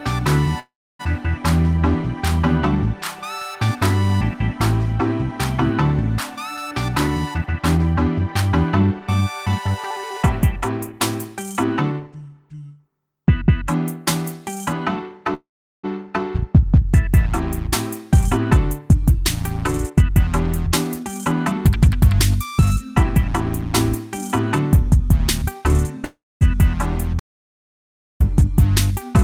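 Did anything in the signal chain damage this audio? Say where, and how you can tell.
Yes. Three kinds of damage show up, two in the network and jitter-buffer stage and one in the capture path.

Call audio freezes occur at 0.59–1.01 s, 15.34–15.85 s and 26.05–26.43 s. Each time the last sound is stretched into a decaying buzz that falls to silence for about 0.29, 0.39 and 0.23 s, and then the audio resumes exactly where it left off. Nothing is lost, but each freeze adds 0.40, 0.50 and 0.36 s of delay. This likely comes from delayed packets draining the jitter buffer.

Jitter buffer speed-up also shows up as the receiver works excess buffered audio back off. The audio runs fast at unchanged pitch at 6.73–9.68 s (109%), 10.92–12.30 s (107%), 18.24–23.64 s (106%) and 24.87–25.97 s (105%). It sounds hurried because the receiver repeatedly cuts out pitch-period-length slices, removing roughly 0.3 s, 0.1 s, 0.3 s and a little under 0.1 s in those stretches.

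An audio dropout to silence runs from 27.20 to 28.20 s. The sound cuts off mid-flow into about 1 s of silence with no room tone, then returns mid-flow, and whatever fell in that second is gone. The input was likely lost upstream, through a disconnect or mute, while the recorder kept writing silence.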